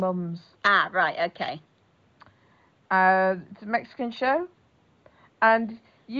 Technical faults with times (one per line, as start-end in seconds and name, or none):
none